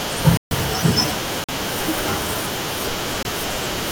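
At 0.37 s the speech drops out to a block of digital silence lasting 0.14 s, ending at 0.51 s; shorter blocks follow at 1.44 s (46 ms, which fits a 2048-sample buffer left unfilled) and 3.23 s (24 ms). The output was likely not filled in time, so samples read as zero. The waveform shows a flat line at zero, and the spectrogram a blank vertical band.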